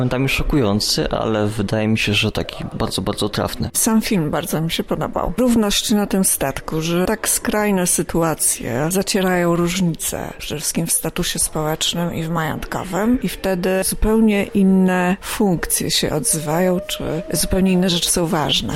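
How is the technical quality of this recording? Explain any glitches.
One glitch stands out: a DC step at 17.41 s. The waveform's zero line jumps to a new offset and holds there until the end, as happens when a converter recalibrates or an offset input is switched in. It is heard as a single low thump while the sound continues unchanged.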